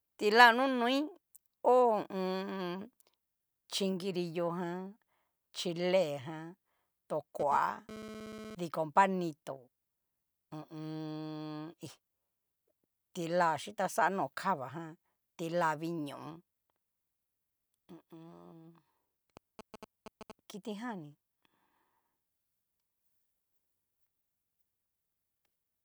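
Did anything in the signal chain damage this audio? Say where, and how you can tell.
Yes. From 7.40 to 8.55 s a hard, raspy GSM phone buzz sits about 13 dB below the speech. This is interference at the analogue wiring stage: a nearby 2G handset transferring data radiates bursts at 216.7 Hz, and a junction in the audio circuit rectifies them. On a spectrogram it shows as a comb of harmonics stacked on 217 Hz, unrelated to the speech; the waveform carries a regular pulse train.

A second fault, GSM signalling bursts, runs from 19.37 to 20.32 s, roughly 15 dB under the speech. It enters at the same analogue stage. The handset sends only short groups of radio bursts while signalling, and rectification turns them into a galloping dit-dit-dit of short 217 Hz buzzes. A spectrogram shows short vertical clusters of the same harmonic comb with gaps between them, and the waveform shows clumped spikes.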